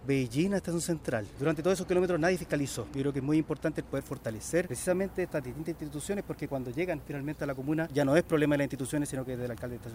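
From 3.94 s to the end of the clip, the audio shows low bit depth with noise shaping. The signal has been reduced to 10 bits, and the rounding error from that coarse quantisation has been filtered so its energy is pushed toward high frequencies rather than spread evenly. The result is a constant, thin hiss sitting roughly 30 dB below the signal, growing markedly brighter and stronger toward the top of the band.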